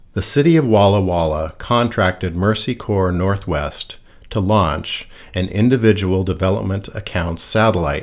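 Listening to this speech recording, nothing stood out as a technical problem anywhere in it.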